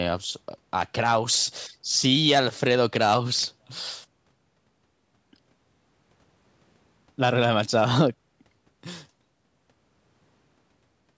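Nothing here counts as a fault: the speech has simply been through a call's microphone processing, so the lowest bass is trimmed away and there's nothing above 8 kHz, exactly as you'd expect from that kind of path.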